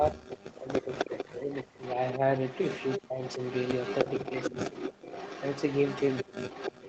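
From the start to 1.82 s the voice keeps sinking and breaking up, dropping by as much as about 40 dB over roughly one and a half seconds. Shorter dips follow at 2.18 to 2.22 s (about 5 dB), 2.99 to 3.4 s (about 40 dB), 4.5 to 4.73 s (about 20 dB) and 6.23 to 6.33 s (about 35 dB). This is likely speech suppressed in double talk: with both sides talking, the echo canceller mistook the talker for loudspeaker echo and turned it down.

A faint trailing copy of the voice, about 30 dB down, first appears at 0.31 to 0.35 s. From 0.76 s to the end it becomes a stronger copy, only about 10 dB below the speech and lagging 308 ms behind it. This is likely an echo leak, where a loudspeaker's output reached that same side's microphone and wasn't fully cancelled before being sent back.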